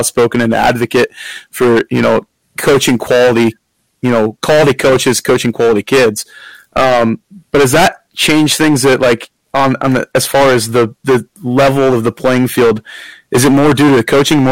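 Hard clipping runs through the whole speech clip. The signal is driven about 21 dB past what the chain can pass, so around one sample in seven is cut flat. Unlike gentler soft saturation, it's a harsh, gritty fuzz on every loud syllable.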